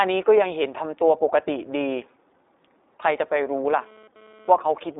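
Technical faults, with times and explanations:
Throughout, iLBC codec. The sound is narrowband and plainly damaged, rough and slightly synthetic. Nothing passes above 3.8 kHz, and the line band runs from 300 Hz to 3.7 kHz. Each 20 ms frame is coded on its own, which fits the 15.2 kbps mode.
3.66 to 4.51 s, GSM phone buzz. A hard, raspy buzz at about 217 Hz, rich in harmonics, sits about 26 dB below the speech. It comes from a nearby 2G phone's radio bursts being rectified in the audio circuit. It comes and goes, as during a data transfer.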